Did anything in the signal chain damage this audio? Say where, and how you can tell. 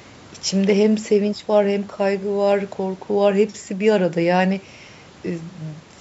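Yes: the sharp clicks at 2.52 s and 5.32 s are dropped samples. A couple of samples vanish and the waveform jumps, likely from a driver or buffer glitch.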